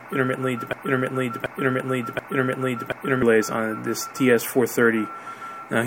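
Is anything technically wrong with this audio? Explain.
Yes. From 0.73 to 3.23 s there is a broken-record loop: a 0.73 s fragment repeats exactly, back to back, three times, and the audio that belonged there is missing. This is likely a stalled player, encoder or stream resending its last held fragment.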